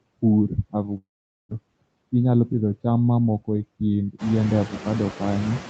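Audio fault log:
throughout, noise suppressor artifacts: The background sinks in the gaps between words and swells back up beneath them. A noise suppressor is pulling down each frequency band it judges to be steady noise, frame by frame, by up to about 21 dB. That makes the noise floor pump with the speech. The effect is clearest after the room noise rises by about 15 dB near 4 s.
0.97–1.53 s, long network dropout: The speech breaks off. What follows is a short continuation of the last sound that decays into a buzzy hiss, then roughly 0.44 s of silence before the audio resumes. About 0.4 s of speech never comes back. The cause is likely a stretch where no packets reached the receiver. The receiver concealed the gap for just over half a second, and once the concealment ran out only silence was left.
1.61–2.55 s, jitter buffer speed-up: Right after the dropout, up to "cham mamoko e kind", the speech sounds hurried. 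It runs at about 112% of normal speed with its pitch unchanged. Delayed audio arrived in a bunch after the gap, so the jitter buffer held more than its target. To bring the delay back down, the receiver repeatedly cut out tiny pitch-period-length slices, roughly a tenth of a second in total, through the band-limited, 8 kHz-wide Opus call audio.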